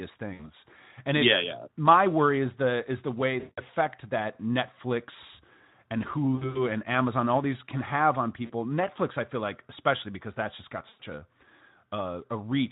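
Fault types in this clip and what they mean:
VoIP packet loss concealed by the speech codec: when packets go missing, the decoder keeps going from its last pitch and filter settings and turns the gain down as it goes, so the speech smears into a buzzy or hissy stretch that fades. It happens five times, near 0.33, 3.39, 6.35, 8.46 and 10.89 s, with gaps of 40 to 180 ms. The one at 6.35 s is scattered over about 200 ms, over Speex coding that sounds only lightly roughened.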